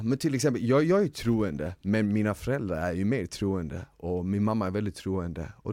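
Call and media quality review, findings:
Filter restarted on every block, 1.10–1.90 s, between "exempel jag jag är" and "mina föräldrar är ju". Buzz near 94 Hz, fits 512-sample buffer at 48 kHz. State cleared per block, each block opens on a transient. Unlike mains hum, tracks speech level.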